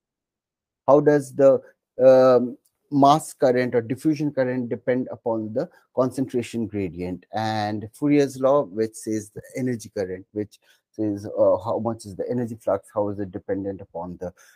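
No technical faults can be heard anywhere in the clip.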